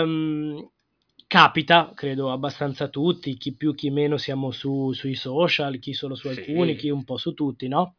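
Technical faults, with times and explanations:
No technical faults are audible anywhere in this speech.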